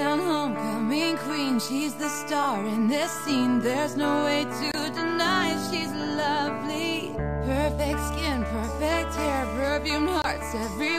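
At 2.42 to 2.46 s a corrupt frame was decoded. Damaged bits in a short run of compressed frames were played anyway, so energy landed at wrong frequencies. The result is a brief glitch, peaking around -15 dBFS, lasting about 34 ms.

At 4.70 to 4.75 s and again at 10.22 to 10.26 s, corrupt frames were muted. The decoder rejected damaged frames and the player substituted silence, leaving abrupt holes of 48 ms and 36 ms. These fit two lost frames and one, with timing preserved.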